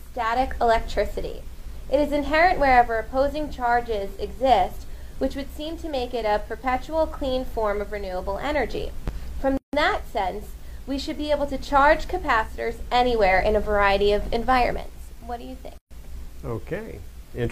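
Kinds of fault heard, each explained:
Gap at a join of encoded pieces: separately encoded segments were joined untrimmed, leaving each encoder's start-up delay and last-frame padding as silence. The sound cuts out for 158 ms at 9.57 s and 130 ms at 15.78 s, then resumes where it stopped.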